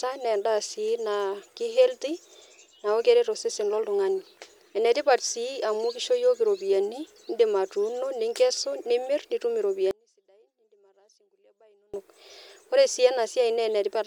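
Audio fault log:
9.91–11.94 s, audio dropout to a faint residue: the speech cuts out abruptly mid-flow and, for about 2.03 s, all that remains is a faint trace of it, roughly 35 dB below its normal level, before it snaps back just as suddenly. The hard edges rule out a pause or fade. The likely cause is a brief loss of the main signal while the path after the break stayed live, passing only that weak leak through the gap.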